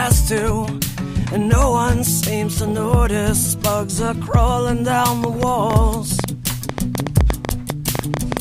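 Likely interference from nearby equipment or a faulty connection injects a train of clicks from 5.24 s to 8.38 s: around twenty similar pulses, unevenly spaced at about 7 per second, standing roughly 15 dB above the sound as sharp ticking and popping.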